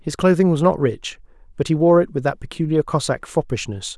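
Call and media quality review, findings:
No audible faults found in speech; nothing to escalate.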